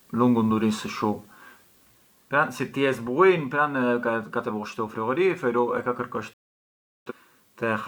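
At 6.33 s the speech drops out in a digital broadcast dropout: the receiver stopped getting usable frames and muted, so the audio fades out in about 3 ms, almost a hard cut, and stays silent until 7.12 s. Roughly 0.73 s of programme is simply gone, a gap that fits around 17 lost frames. On a waveform this is a flat line with near-vertical edges; a spectrogram shows a clean, empty vertical band across every frequency.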